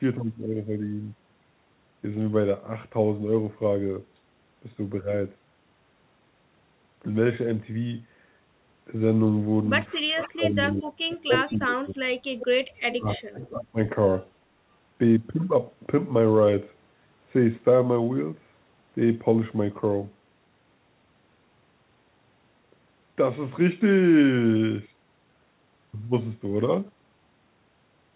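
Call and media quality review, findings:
Speech suppressed in double talk, 10.07–11.97 s and 12.9–13.78 s. Near-end speech drops by up to about 30 dB (around 1.5 s affected), then up to about 25 dB (around 0.7 s). The echo canceller's suppressor likely attenuated the talker along with the echo while both sides spoke.

Echo leak at 10.21–10.29 s, 11.37–11.58 s and 12.4–12.46 s. Short delayed copies of the voice trail it by 301 ms, at about 15, 10 and 15 dB below the speech. This is likely residual loudspeaker echo that got past the far-end canceller and was sent back. The audio is band-limited to 4 kHz, consistent with G.711 mu-law.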